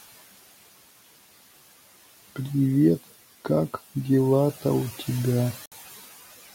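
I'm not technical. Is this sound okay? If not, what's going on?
No. Two problems can be heard.

The first runs through the whole clip: noise suppressor artifacts. A noise-cleaning feature keeps turning down what it takes to be background hiss, moment by moment. The quiet room noise under the speech drops away in the pauses and comes back when the talking starts. Plain room noise would stay steady; this pumps in step with the speech.

The second is a brief hole at about 5.66 to 5.72 seconds, lasting about 0.06 seconds. The sound cuts out and then picks up further along, as if it had kept playing during the silence. That points to a Bluetooth dropout, likely sound data failing to reach the headphones in time. A skip that replays or stutters would repeat sound; this one simply loses a sliver of it.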